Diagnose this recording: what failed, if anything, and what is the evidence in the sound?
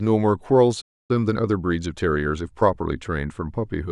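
The playback stage failed first: a playback stall cuts the speech off mid-flow at 0.81 s and leaves silence until 1.11 s, a gap of about 280 ms. The cause is likely a starved buffer or a blocked player thread. The break is a clean cut to silence, with no repeated fragment or burst of noise.

Immediately afterwards, from 1.11 s to 2.97 s, the player makes up the delay with time-compressed catch-up. The speech runs about 1.15 times faster while its pitch stays normal, as short slices are cut out and cross-faded together. This differs from a sample-rate mismatch, which would raise the pitch along with the speed. Normal pacing returns once the backlog is cleared at 2.97 s.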